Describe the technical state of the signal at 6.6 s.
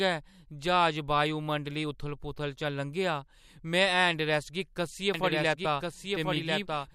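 At 6.6 s a second, dry copy of the speech trails about a second behind, roughly 5 dB quieter, with no added room colour. This doubled audio track cuts in abruptly at 5.14 s and runs to the end, likely from a second capture through a slower path.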